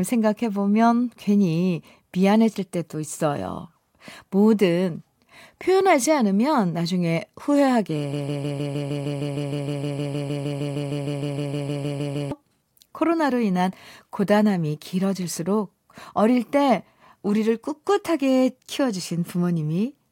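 At 8.13 s the speech locks into a broken-record loop. A fragment of about 0.15 s repeats exactly, back to back, 27 times. The effect is a rapid, mechanical stutter that holds until 12.32 s, just over four seconds. The likely cause is a stalled player, encoder or stream that kept resending the last piece it held. Whatever should have played during those seconds is gone. When normal sound returns, it jumps ahead abruptly.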